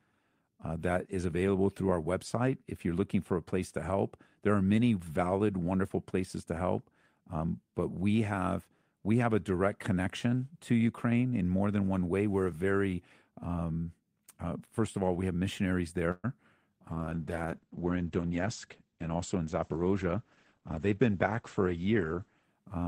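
The clip is speech, with three call faults close together. At 16.11 s, just after "all we have missionaries", the sound stalls for about 0.14 s. A brief fading continuation ends in a short silence of about 20 ms. This call audio freeze is likely packets held up until the jitter buffer ran dry. Nothing is lost; the speech resumes where it stopped, 123 ms later. From 16.9 s to 22.5 s, a call bitrate drop makes the speech muffled and rough. The encoder fell from 32 kbps to 11 kbps. The audio bandwidth shrank from 20 kHz to 8 kHz. Between 18.18 s and 19.39 s, a jitter buffer speed-up plays the speech at 109% speed without changing pitch. Short pitch-period pieces are cut repeatedly, removing about a tenth of a second to shed excess buffered delay.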